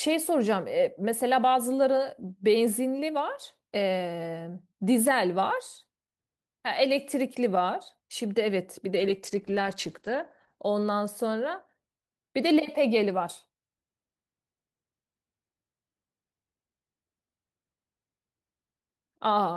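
At 8.97–10.63 s, a call bitrate drop from 32 to 11 kbps leaves the speech muffled and rough; the spectrogram goes blank above 8 kHz.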